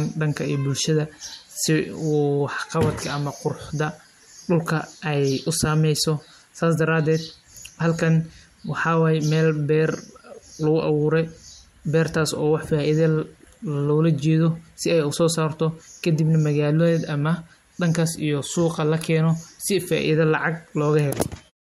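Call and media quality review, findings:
Nothing to flag in this speech, just a smooth editor-style fade-out right at the tail, easing down around 21.5 s with no click or hard edge.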